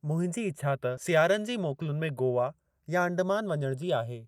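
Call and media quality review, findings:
Channels drifting apart, whole clip: slow flanging when summed to mono. The two channels likely come from devices on separate clocks, roughly 100 ppm apart. The inter-channel delay creeps to about 0.3 ms, sweeping comb notches slowly across the spectrum.

Skip ahead, 0.97 to 0.99 s: playback jumps forward with no fill, joined almost directly. Roughly 400 ms of speech is missing, dropped in transit or by the jitter buffer on overflow while later audio was queued.

Jitter buffer speed-up, 1.57 to 2.21 s: speech runs about 107% speed at unchanged pitch and sounds hurried. The buffer was over target, so the receiver removed short pitch-period segments repeatedly, around 50 ms in total, to cut the latency.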